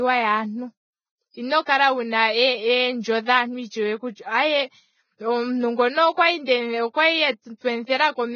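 Throughout the clip, the speech has likely been through low-rate Vorbis compression, with damage that points to a very low bitrate of around 16 kbps. At this rate the encoder keeps only a smooth spectral outline and quantises the detail above it so coarsely that fine structure turns into noise of similar energy. Nothing survives above 6.5 kHz, so the treble is cut off, and what remains sounds heavily grainy and hissy, with roughened tones and smeared onsets.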